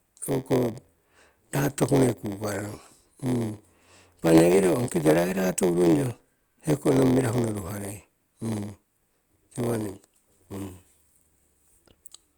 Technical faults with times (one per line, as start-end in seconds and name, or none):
0.00-12.37 block size mismatch (padded)